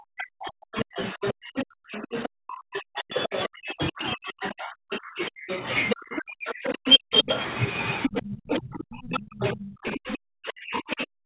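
From 0.0 to 7.3 s and again from 8.08 s to the end, speech suppressed in double talk is heard. The echo canceller likely could not separate the talker from the loudspeaker echo and turned both down, so the talker's voice dips deeply, by roughly 40 dB at worst, or breaks up for several seconds.

The other side's voice leaks through at 0.79 to 2.28 s, 2.99 to 3.4 s, 4.44 to 5.95 s, 6.48 to 7.4 s, 8.02 to 8.6 s and from 9.13 s to the end. This is likely residual loudspeaker echo left in the microphone signal, and it comes through at about the same level as the talker or slightly below.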